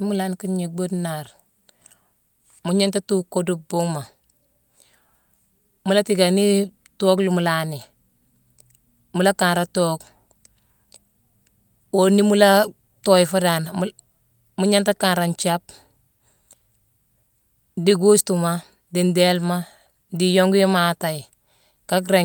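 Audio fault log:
No fault is found in this speech clip.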